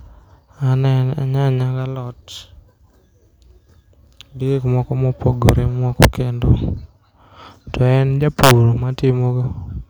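At 5.49 s, from 6.03 to 6.05 s, and from 8.44 to 8.51 s, loud speech peaks trigger integer overflow. Samples pushed about 1 to 2 dB past full scale wrap to the opposite sign instead of being limited, producing violent cracks far harsher than ordinary clipping.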